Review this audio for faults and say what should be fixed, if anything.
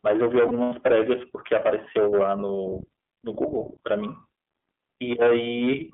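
The iLBC codec runs throughout: band limited to roughly 200 Hz to 3.4 kHz, a rough, synthetic texture consistent with 30 ms frames at 13.33 kbps. To prevent it, use a wideband codec such as Opus.

Lost iLBC frames between 0.47 and 0.73 s produce a held, buzzy vowel as the decoder repeats the last pitch cycle. About 120 ms is missing across 240 ms, which fits four 30 ms frames, with the longest gap near 100 ms. To prevent it, add jitter buffering and forward error correction on the network path.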